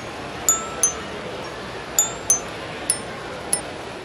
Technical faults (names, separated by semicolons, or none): damaged data in a compressed stream